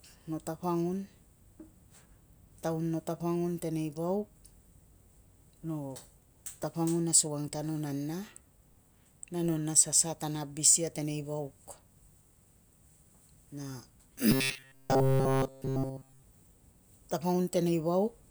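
Between 14.31 and 16.23 s, new audio likely stopped arriving in time, so the playback software kept looping the last short buffer, about 7.5 ms long, while the real signal was skipped. That loop imposes a fixed 133 Hz buzz across the entire stretch, producing robotic sound from repeated short buffers: the voice flattens into a rigid, metallic buzz that only loosely follows the speech underneath.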